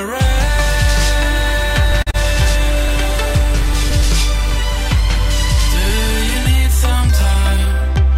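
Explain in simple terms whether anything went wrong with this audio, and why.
Short skips are heard at 1.92, 3.91 and 5.90 s, every two seconds, each losing roughly a hundredth of a second with the two sides butted together. That regular spacing points to audio missing between chunks, likely from a recorder handling sound in two-second blocks.

From 2.02 to 2.09 s there is a short stall from a late packet. A piece of audio arrived late, so the receiver held the last sound for 44 ms until it came, then carried on with nothing lost, only briefly stretched.

Right after, from 2.11 to 2.16 s, comes a short concealed packet loss. About 40 ms of audio never arrived. The receiver covered the gap by extending the preceding sound for about 30 ms, which comes across as a brief smear.

From 7.34 to 7.73 s a jitter buffer speed-up makes the audio run about 12% fast at unchanged pitch. The receiver had built up too much delay and cut tiny slices, roughly 50 ms in total, to catch up, so this stretch sounds hurried.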